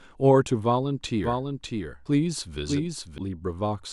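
A slower second capture path likely mixed the speech in twice, giving a doubled audio track from 1.24 s to 3.18 s. A dry, full-band copy trails about 0.7 s behind, roughly 5 dB quieter, and starts and stops abruptly.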